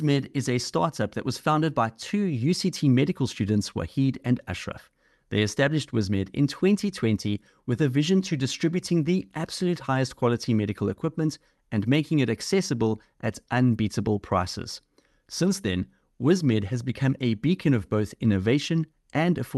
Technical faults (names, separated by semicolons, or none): none